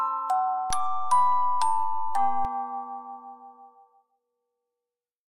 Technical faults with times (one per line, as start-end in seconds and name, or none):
0.70-2.45 DC step